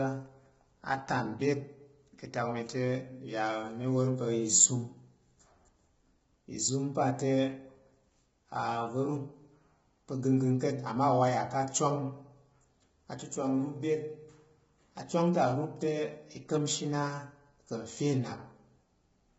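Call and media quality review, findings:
Speech rough and grainy throughout, noise between harmonics, nothing above 7.7 kHz; heavy low-delay AAC compression, likely AAC-ELD, short frames smearing pitch harmonics, consistent with a low bitrate around 16 kbps.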